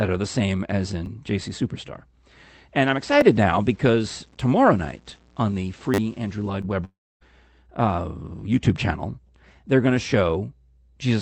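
Right after "are the same as", at 1.06 s, there's a tiny stutter: a repeated buffer. The playback device didn't get fresh audio in time, so it replayed the last chunk once. The repeat is so short, about 10 ms, which fits a 10 ms buffer, that it comes across more as a click than a stammer. The same thing happens at 3.21 s, another single 10 ms repeat and another little tick.

From 2.82 s to 6.50 s the speech takes on a gritty, grainy edge that tracks the voice and gets worse on the quieter bits. That points to low bit depth without dither. The audio sounds like it was truncated to about 9 bits with no dither to smooth it over, so the rounding error follows the signal and sits at roughly 35 dB below it.

Inside that gritty stretch, at 5.94 s to 5.98 s, there's a bigger repeated buffer. The same 10 ms slice plays four extra times, so you get a short buzzy stutter and about 40 ms of real audio goes missing.

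At 6.61 to 6.65 s there's a short concealed packet loss. About 20 ms never reached the decoder, and the receiver patched most of it by stretching the preceding sound before blending back in. It's a quick smear rather than a gap.

Then from 6.85 s to 7.23 s, most likely a long network dropout. Around 360 ms of audio is gone. The receiver carries the last sound on briefly as a fading buzz, but most of that stretch, about 270 ms, is essentially silent before the speech picks up again further along, with the missing piece simply skipped. Throughout, the call codec's band limit is audible, with nothing above about 8 kHz.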